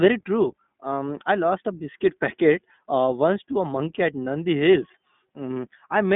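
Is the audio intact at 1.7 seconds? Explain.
No. At 1.7 s, as throughout the clip, the speech carries iLBC codec damage. Each short frame, consistent with 20 ms, is coded independently, giving a plainly rough, synthetic texture. The band runs roughly 150 Hz to 3.6 kHz, with nothing above 3.8 kHz.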